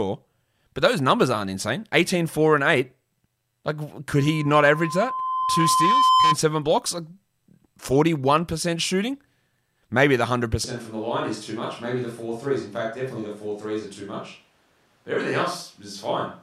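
A speech recording with two faults. From 4.16 s to 6.37 s there is loudspeaker feedback squeal: a steady 1 kHz tone swells over roughly two seconds until it sits around 5 dB above the speech. The microphone is picking up the loudspeaker it drives, and at 1 kHz the loop gain exceeds unity, so that frequency keeps recirculating and growing until the loop is broken. At 10.65 s the sound abruptly turns roomy and hollow, with thinner bass, a drop of roughly 5 dB and a background noise floor only about 35 dB below the speech. It stays that way to the end. This switch to a distant microphone is likely the close microphone's feed failing or being dropped, leaving a pickup further away, such as a camera's, to carry the recording.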